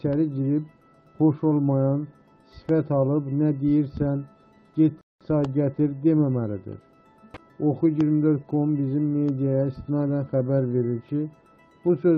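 A Bluetooth stall, likely interference holding up packets until the headphones' buffer ran dry, cuts the audio to silence from 5.01 to 5.21 s.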